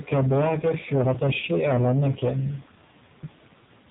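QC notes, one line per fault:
throughout: AMR narrowband mobile codec. Speech is band-limited with nothing above 4 kHz, and at a low rate consistent with about 5.9 kbps the pulse-driven vocal tract model leaves heavy damage: a buzzy, synthetic quality.
1.40–1.44 s: lost AMR speech frame. A single 20 ms frame drops out, and the decoder carries forward the previous pitch and vocal tract settings at reduced gain, producing a brief dip or warble before the speech picks up again, rough for a moment.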